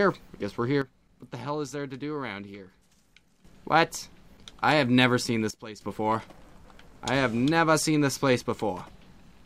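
At 0.82 s the level drops by about 11 dB until 3.45 s, then by about 14 dB from 5.51 to 5.81 s. These are sudden gain jumps, likely from unramped digital gain changes, with sound and noise floor dropping together.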